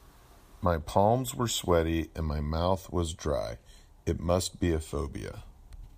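No technical faults are audible.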